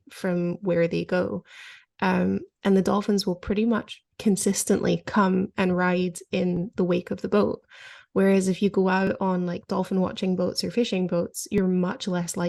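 At 6.57, 9.07 and 11.58 s the speech has overlapping chunks. Each 2.5 s block starts about 7 ms before the last one ended, so that sliver replays as a small stutter-click. Unlike dropouts, nothing goes missing, and the clicks fall at strictly regular spacing.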